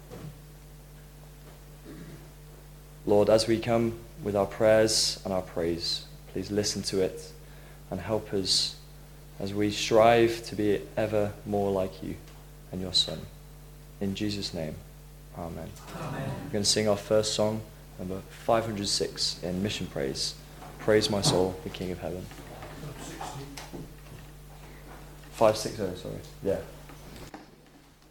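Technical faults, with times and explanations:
No technical faults are heard in this clip.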